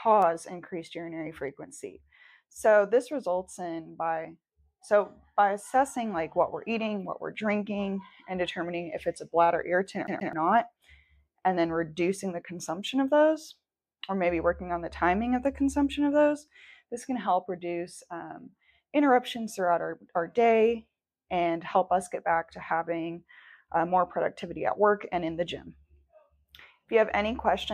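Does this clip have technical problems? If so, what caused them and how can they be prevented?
Yes. A scratch threw the laser back one track per disc revolution, so the CD got stuck on one turn from 10.07 to 10.33 s. A 0.13 s slice repeats twice, each jump briefly muted, making a fast, even stutter. Cleaning or replacing the disc prevents it.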